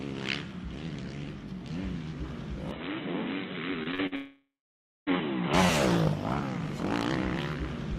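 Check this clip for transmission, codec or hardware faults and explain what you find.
Three faults are audible, overlapping in the middle of the clip.

Input switched to a poorer device, 2.71 to 5.54 s: the sound abruptly turns dull, with nothing above 4 kHz and a faint new noise floor, with no gap and no level jump. This likely comes from capture moving to a narrower-band microphone or headset profile, then switching back.

Repeated packet loss (robotic sound), 3.83 to 4.13 s: four short holes, the longest 48 ms, are each patched by stretching the preceding sound. About 40 percent of this span is concealed, so the audio turns choppy, with fragments missing.

Long network dropout, 4.15 to 5.09 s: about 0.92 s of audio never arrives. The last sound is extended as a decaying buzz, then roughly 0.56 s of silence follows before the audio resumes without the lost part, likely from a stall in the network stream.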